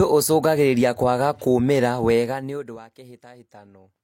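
From 2.14 to 2.88 s the speech is turned down by about 25 dB with zipper noise: the gain drops in unsmoothed 1 dB steps, roughly fifty a second, and each jump leaves a small click, so a fine ticking rides over the fade.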